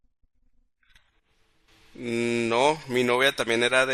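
Nothing stood out on listening to this speech recording.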